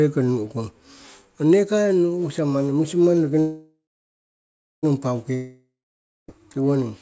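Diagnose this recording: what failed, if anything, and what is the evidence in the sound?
At 3.40 s, right after "manni musimang noki", the speech stops and the last sound carries on as a fading buzz that sinks into about 1.0 s of silence. The speech resumes at 4.85 s exactly where it left off, so about 1.4 s of gap has been inserted and nothing is lost. This is a call audio freeze at the network and jitter-buffer stage: packets were likely delayed, the buffer ran dry, and the receiver filled the wait. The speech picking up intact is what separates it from a dropout.

At 5.35 s, after "manni musimang noki nong", the same fading buzz appears, then about 0.6 s of silence. When the sound returns at 6.40 s, about 0.94 s of speech is missing, and the stretch after the gap does not follow on from where it stopped. This is a long network dropout, likely packets lost outright rather than held up, so the receiver concealed the hole and then skipped ahead. 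Within the G.722 call path's band, which stops at 8 kHz, both events share the fill sound; only the missing speech marks this one as a dropout.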